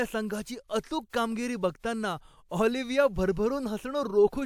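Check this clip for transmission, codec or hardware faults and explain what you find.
Two codec faults are audible, both pre-echo. At 1.09 to 1.13 s and 1.78 to 1.84 s, hiss spreads 41 ms and 59 ms before speech attacks. Block-wide quantisation noise leaks ahead, smearing each onset.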